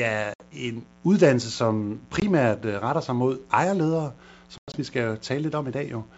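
A 60 Hz mains buzz sits under the whole clip, roughly 30 dB below the speech: a steady, raspy hum from switching spikes twice each cycle. Packet loss on an ADPCM call punches hard-edged silent gaps: 60 ms at 0.34 s, just before "en uddannelse som"; 20 ms at 2.20 s, right after "er en uddannelse som"; then 120 ms scattered across 4.58 to 4.76 s. Each time, the decoder's predictor falls out of sync, so the speech returns slightly distorted briefly.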